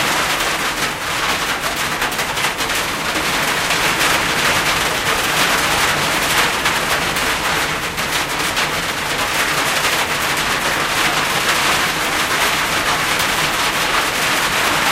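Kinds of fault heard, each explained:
No technical faults are audible anywhere in the recording.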